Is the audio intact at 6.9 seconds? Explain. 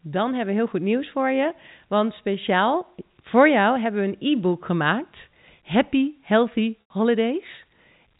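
No, packet loss with pitch repetition strikes at 6.89 s: about 90 ms goes missing, and the last pitch period loops, fading out. A spectrogram shows frozen harmonic stripes fading.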